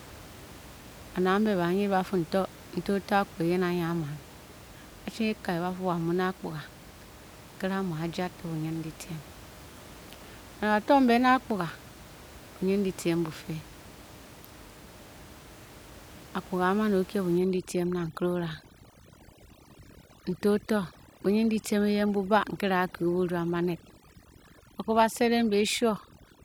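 A speech clip with room noise about 21 dB below the voice. From 17.38 s to the end, overdone noise removal sets in. The background drops and breaks up into twinkling specks. Quiet parts of the voice are cut away.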